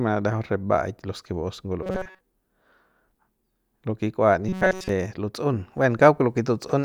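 From 1.83 to 2.21 s and again from 4.49 to 4.89 s, the speech turns into a rigid metallic buzz fixed at 188 Hz, which is robotic sound from repeated short buffers. Most of that time is likely a roughly 5 ms slice replayed while real audio is skipped. Unlike a flanging or comb effect, the buzz stays at a fixed rate rather than sweeping.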